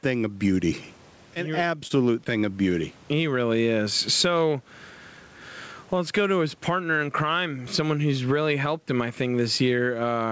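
Speech recorded over a call, with level pumping throughout and three brief concealed dropouts. The gain pumping is constant: the room background sits about 44 dB below the speech, and the gain swings by around 20 dB. Loud and quiet passages end up flattened toward one level. The likely cause is microphone gain set far too high with a fast limiter or compressor clamping down on every loud onset. The short concealed packet loss comes at 1.34 to 1.38 s, right after "of beauty", at 1.88 to 1.92 s, and at 2.24 to 2.27 s, just before "of beauty". Each gap is about 20 ms of audio that arrived too late to decode. The receiver bridged it by extending the preceding sound for roughly 15 to 24 ms before crossfading back, so each point is heard as a short smear or wobble. The top of the band stops at 8 kHz, which fits a wideband call codec such as G.722 at 64 kbps.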